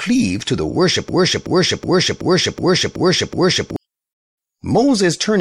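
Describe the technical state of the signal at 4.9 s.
At 4.9 s the signal is intact, with no technical fault audible at that moment.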